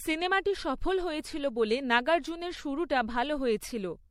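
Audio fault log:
throughout: generation loss. The speech sounds swirly, smeared and oddly hollow, with softened attacks and nothing above 16.4 kHz. It's likely been through about four rounds of lossy encoding, consistent with 64 kbit/s MP3, each pass re-quantising on a shifted frame grid so the artefacts pile up.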